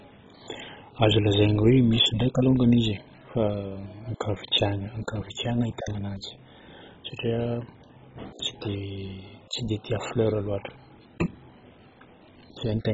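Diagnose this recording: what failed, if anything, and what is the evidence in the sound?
The codec stage failed, most likely through MP2 compression at a very low rate, around 16 kbps. Throughout, the speech is dull with nothing above 7.5 kHz, and upper bands flicker with gurgling, granular quantisation distortion, unlike a clean low-pass filter, which removes treble steadily without that churning texture.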